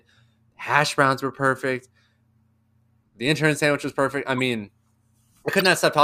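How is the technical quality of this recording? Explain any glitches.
Two short glitches mar the speech, both corrupt frames decoded: at 4.38–4.42 s and, louder, at 5.59–5.66 s. Damaged compressed frames were played anyway, spraying energy to wrong frequencies as brief glitches peaking around -20 and -10 dBFS. Unlike lost-packet concealment, which mutes or smears, these add foreign sound.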